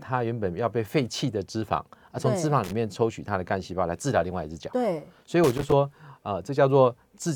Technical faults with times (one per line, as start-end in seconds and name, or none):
2.64-2.72 loose connector crackle
5.44-5.72 loose connector crackle